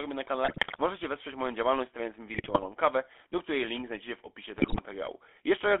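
The whole clip runs through the GSM full-rate codec. The speech sits inside a narrow line band of roughly 300 Hz to 3.5 kHz, and the codec's damage is plain to hear. That first-generation GSM scheme rebuilds the voice from a vocal-tract model fed by a sparse, regularly spaced pulse excitation. The result is a buzzy, gravelly roughness on every syllable, with a coarseness that fits a 13 kbps full-rate link.

On top of that there are three bursts of GSM bit errors, where corrupted bits got into the decoder and scrambled its filter, pitch and gain values frame by frame. The first runs from 0.44 to 0.81 s, right after "robię na" and before "wesprzeć moją działalność stawiając". The second runs from 2.34 to 2.69 s, after "moją działalność stawiając mi" and before "kawę do której link". The third is shorter, from 4.58 to 4.81 s, just after "link znajdziecie w opisie". Each one breaks the voice into squawks, pops and gargling as the spectrum bends and the level jumps around.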